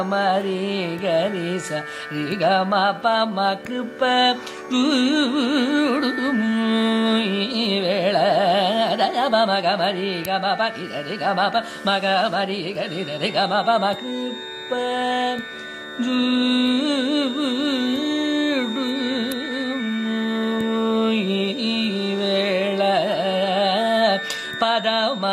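A feedback whistle enters at 12.77 s and runs to the end at 25.33 s: a thin, steady tone at 3.7 kHz, sitting roughly 15 dB below the sound and swelling and fading slowly in level. It is likely a loudspeaker-to-microphone loop held just short of runaway feedback.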